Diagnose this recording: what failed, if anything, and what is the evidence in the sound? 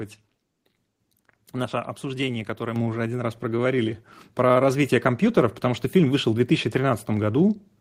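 The microphone volume stepped up at 2.76 s, a call-processing fault. The speech and the background noise jump together by about 6 dB in a single step. Call software judged the input too quiet and raised the device gain at once. A talker leaning closer would lift only the voice, and gradually.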